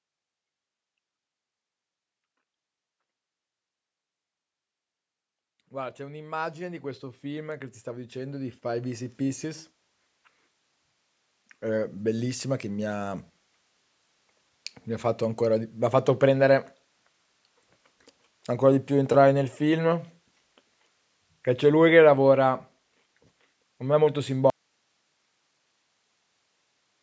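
From 5.69 to 9.71 s, the automatic gain control judges the incoming level too low and steadily raises its gain, by 16 dB over those four seconds. This is automatic gain rising: the speech and the background noise beneath it swell together, so the room grows louder along with the voice rather than the voice simply being spoken more forcefully. The slow climb is the sign of a control loop adjusting, not of anyone changing how they talk.

At 24.5 s the wanted signal is suddenly gone and does not return before the clip ends at about 27 s. This is an audio dropout to a faint residue, likely caused by a break upstream of a path that stayed live. The cut is abrupt, not a fade, and what fills the remaining seconds is only hiss, roughly 50 dB below the speech level. The call microphone processing passes nothing above 8 kHz.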